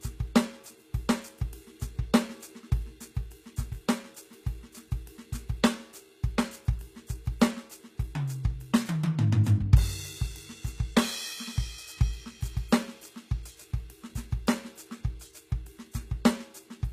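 Across the whole of this music, the treble has a bright but synthetic quality, with plainly audible damage: the upper range sounds copied rather than captured, so its harmonics fail to line up with the body of the sound below, and cymbal-like detail turns gritty and metallic. Nothing reaches above 14.9 kHz. This is likely HE-AAC compression at a low rate, around 20 kbps, rebuilding the top octaves by spectral band replication. A plain low-pass cut would sound dull instead.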